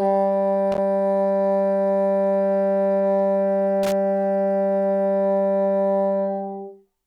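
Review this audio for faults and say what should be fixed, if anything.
Loose connector crackle bursts at 0.72–0.78 s and 3.83–3.92 s: a worn or dirty contact intermittently breaks the signal path, chopping the audio into irregular scratchy crackle. Reseat or replace the suspect cable and clean the connector contacts before recording.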